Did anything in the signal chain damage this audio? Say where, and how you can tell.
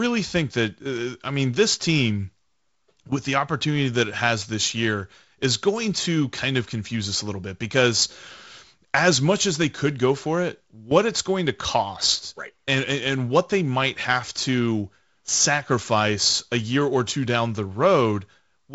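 No, nothing in the signal chain damaged this speech.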